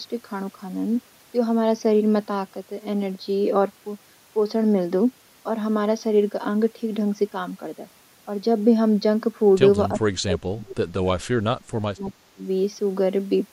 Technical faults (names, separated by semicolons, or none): speech suppressed in double talk